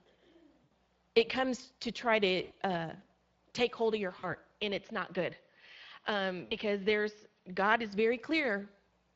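Speex codec damage runs through all 9 seconds of speech: a hoarse, grainy texture, with smeared, noisy formant bands on a spectrogram. This fits a wideband Speex bitrate of around 20 kbps.

VoIP packet loss concealed by the speech codec first appears at 0.63 to 0.72 s, just before "it comes to try". About 80 ms turns into a fading, stretched buzzy tone or coloured noise, seen as flat, decaying bands.

The same fault recurs at 2.43 to 2.53 s, after "comes to try to", again about 80 ms of fading, stretched sound.

It returns at 4.19 to 4.35 s, after "take hold of your", where about 40 ms is lost. The waveform stays weakened until about 4.35 s while the decoder recovers.

From 4.62 to 7.93 s the sound turns duller with no gap or level jump, likely an input switched to a poorer device. The spectrogram shows nothing above 6.4 kHz, and a new noise floor about 45 dB down.

Within that stretch, packet loss concealment strikes again at 6.45 to 6.54 s: about 60 ms of decaying extrapolation, which fits three lost frames.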